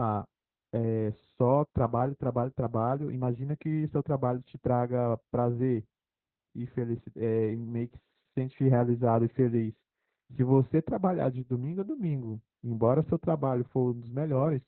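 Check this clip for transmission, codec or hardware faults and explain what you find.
One fault runs through the whole clip: Opus voice compression. The speech sounds muffled, hoarse and slightly robotic from start to finish, with nothing above about 4.2 kHz. That cut-off shows the codec working in narrowband, using the SILK linear-prediction coder alone. The heavy damage points to a bitrate around 8 kbps. At that rate the excitation signal is coded coarsely, which roughens the voice and gives it a synthetic edge.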